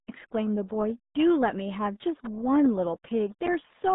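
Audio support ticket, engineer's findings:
RealAudio 14.4 codec, throughout. Speech muffled and gargly, heavy codec damage. Spectrogram: energy confined to about 150 Hz–3.7 kHz, hard empty ceiling above 3.8 kHz. Probable component: RealAudio 1 encode at what sounds like 8 kbit/s, which discards everything above about 3.8 kHz.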